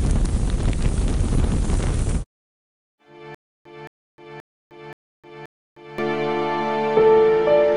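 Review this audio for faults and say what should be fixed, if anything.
Stutter with silent gaps from 3.35 s to 5.98 s: a 219 ms fragment replays five times at a steady 528 ms period, with about 308 ms of dead digital silence after each burst. The repeating fragment and hard silences are likely the result of a playback or streaming stall, where each retry reissued the last buffered chunk and then starved. The sound that belonged in that span never arrives and is lost. To prevent it, give the player enough buffering and network headroom that it never underruns.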